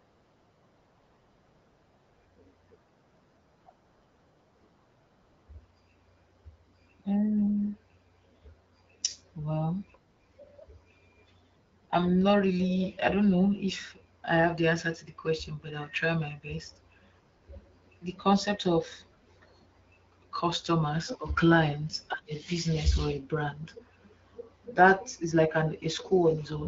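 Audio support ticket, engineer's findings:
No fault found in the speech; nothing to action. The path sounds like AMR wideband (HD Voice) at 12.65 kbit/s, with audio limited to about 7 kHz and only light codec coloration.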